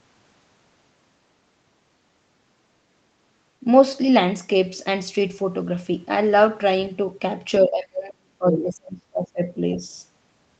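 From 7.65 to 9.6 s the talker's speech sinks, with the deepest dips around 35 dB down, for about two seconds in total. This is speech suppressed in double talk, most likely an echo canceller that heard both sides at once, could not separate the talker from the loudspeaker echo, and turned everything down. A dropout from packet loss behaves differently: it gives short, clean gaps or concealment buzz, not this level-driven attenuation that holds while the far end is active.

Inside that stretch, from 8.53 to 8.57 s, a brief scrap of a second voice cuts through, only a few dB quieter than the talker. That is the other side's voice leaking through, likely residual echo the canceller failed to subtract from the microphone signal. It differs from crosstalk or a second person in the room because it is a fragment that sits inside the suppression window, and it arrives in the same 8 kHz-limited band that the Opus call path gives the rest of the clip.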